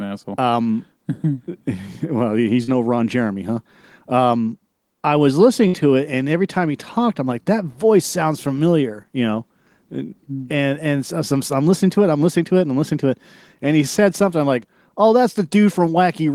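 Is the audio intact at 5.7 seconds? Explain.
No. A burst of packet loss hits from 5.67 to 5.75 s: a short run of consecutive packets never arrived in time to be played. The receiver covered the hole by stretching the last bit of speech it had and fading it down for about 61 ms, so the voice briefly smears into a held, dimming sound. Playback then resumes further along, and roughly 60 ms of the original speech is simply missing.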